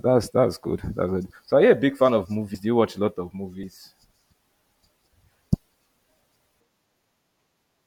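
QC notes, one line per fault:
2.54 s: compressed frames skipped. The speech jumps ahead about a fifth of a second, roughly seven 32 ms frames lost.
3.63 s: compressed frames skipped. Another forward jump of about 150 ms, a few 32 ms frames missing or rejected by the decoder.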